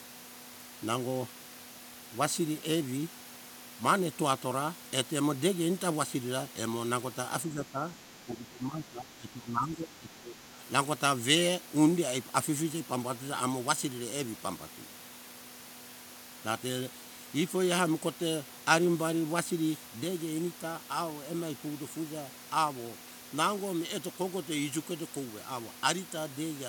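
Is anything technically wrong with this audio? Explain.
Yes, there are two problems.

The speech gets pushed down in two spots, and it sounds like speech suppressed in double talk. From 7.52 to 7.87 s there's a shallow dip of around 5 dB. Then from 8.25 to 10.37 s it's much worse, roughly 15 dB down for about two seconds. The likely cause is an echo canceller hearing both sides at once, failing to separate this talker from the loudspeaker echo, and clamping down on everything.

From 20.04 s to the end, the level drops abruptly by 6 dB and stays there. That's the signature of one channel dropping out. Anything common to both channels loses half its contribution once they're summed to mono, which is exactly a 6 dB fall, and anything that lived only in the missing side vanishes. The likely explanation is that one stereo channel simply stopped delivering signal for the rest of the recording.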